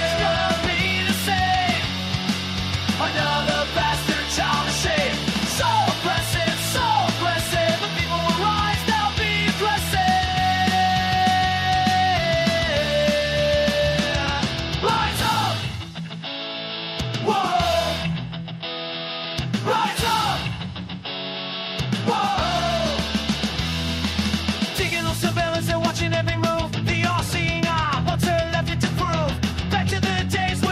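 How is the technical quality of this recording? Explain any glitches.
No technical glitches can be heard anywhere in the recording.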